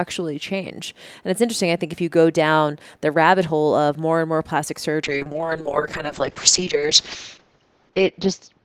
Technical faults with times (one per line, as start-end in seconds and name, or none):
5.04-8.64 call bitrate drop